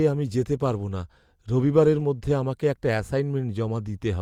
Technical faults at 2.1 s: none

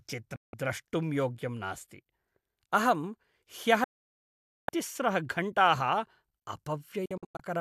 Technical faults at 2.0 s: none

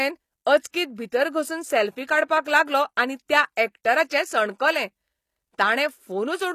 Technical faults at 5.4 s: HE-AAC compression

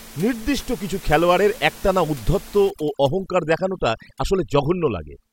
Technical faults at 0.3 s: none

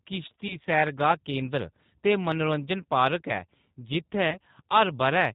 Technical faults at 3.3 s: G.729 codec

